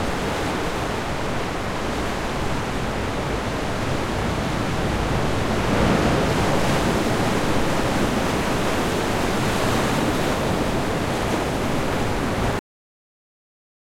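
At 12.59 s the audio has a cut-off end: the sound stops mid-event rather than fading out, and everything after that point is dead digital silence. The final stretch of audio was never written or played out, so there is no natural decay or room tail. On a waveform the trace drops abruptly from full activity to a flat line; on a spectrogram the energy ends in a sharp vertical edge across all frequencies, followed by blank space.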